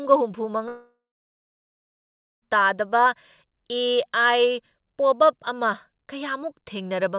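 A speech clip, heard through a G.711 mu-law call codec with nothing above 4 kHz. At 0.68 s the sound smears into a fading buzz, falls silent, and resumes at 2.43 s with a stretch missing, likely a long network dropout that outlasted the receiver's concealment.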